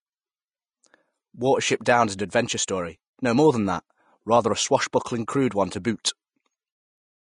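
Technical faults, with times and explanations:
Throughout, Vorbis compression: the speech has nothing above 10.6 kHz, and the remaining treble sounds hissy and grainy, with blurred consonant attacks and a roughened edge on voiced sounds. The cause is likely low-quality Vorbis encoding at a rate that points to roughly 27 kbps. Treble quantised that coarsely turns fine detail into noise. A spectrogram shows a hard ceiling at 10.6 kHz, with speckled, smeared energy beneath it.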